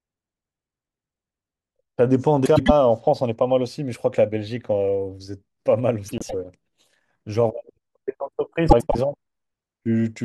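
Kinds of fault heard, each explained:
Frames out of order: two adjacent runs of coded frames were decoded in swapped sequence, so a roughly quarter-second stretch of speech plays with its two halves exchanged and no time lost. It happens at 2.45 to 2.70 s, 6.08 to 6.34 s and 8.69 to 8.96 s, each heard as a brief garbled flutter. Each swapped block lasts about 104.5 ms, which fits runs of four codec frames.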